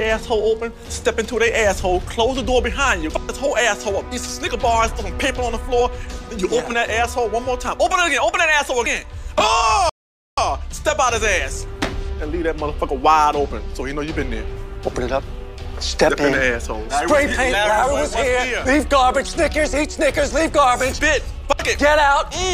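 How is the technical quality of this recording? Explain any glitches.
The recording has one glitch, a rebuffering stall from 9.89 to 10.38 s. The player exhausted its downloaded audio and waited for more, so the sound drops to silence, then resumes exactly where it stopped, adding 0.48 s.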